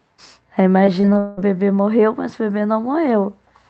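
From 0.85 to 1.39 s, repeated packet loss leaves several holes, the longest 182 ms, patched by stretching earlier sound, giving choppy, robotic speech.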